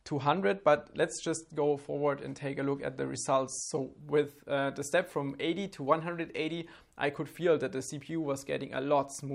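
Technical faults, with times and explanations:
0.0–4.0 s, adaptive stream starting at a low bitrate: nothing above 11.2 kHz and heavier codec artefacts, consistent with a low-bitrate encode around 48 kbit/s chosen for fast startup. At 4.0 s the player steps up without a gap, fitting about 128 kbit/s, and the treble returns.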